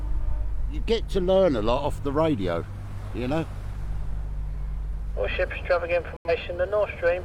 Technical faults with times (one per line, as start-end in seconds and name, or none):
6.16-6.30 corrupt frame muted